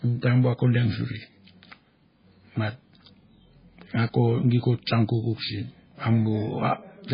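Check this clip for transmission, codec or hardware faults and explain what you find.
One fault stands out, and it runs through the whole speech clip: heavy MP3 compression is the likely cause. There's nothing above 5 kHz, so the treble is sliced off cleanly, and the sound has that watery, swirly texture you get when weak frequency lines drop in and out from frame to frame. S sounds go metallic and attacks smear. It all points to an encoder starved of bits, which fits a bitrate down around 16 kbps.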